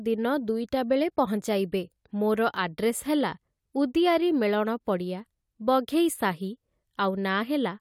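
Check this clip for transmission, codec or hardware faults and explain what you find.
No faults found in this recording.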